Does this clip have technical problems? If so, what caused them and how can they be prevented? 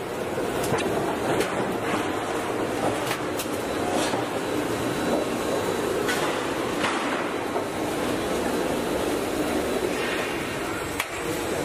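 Yes. From 0.77 to 0.82 s there is damaged data in a compressed stream. Bytes in the file or stream were corrupted there. The decoder misread those frames, lost sync and searched for the next frame header. Verified checksums and error-checked transfer would prevent it.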